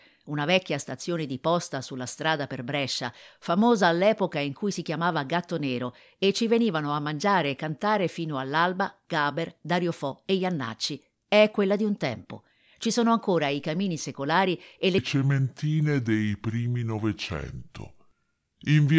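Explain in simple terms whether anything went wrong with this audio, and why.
From 14.98 s to 18.98 s, a wrong sample rate plays the speech at two-thirds speed and seven semitones low, which fits 24 kHz audio run at 16 kHz.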